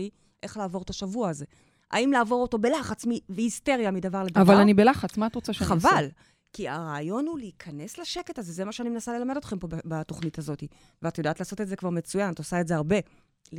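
Sharp single clicks at 6.04, 8.19, 9.59 and 11.78 s, likely dropped samples: a fraction of a millisecond vanishes, making a waveform step and thin vertical spectrogram line.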